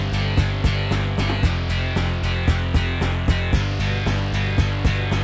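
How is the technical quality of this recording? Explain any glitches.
No technical faults are audible.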